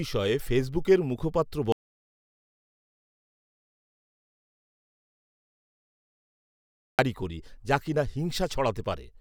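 Audio dropout to silence from 1.72 to 6.99 s, after "ফেসবুকের মুখপাত্র": the input likely disconnected, leaving about 5.3 s of silence before "করি যা কি না".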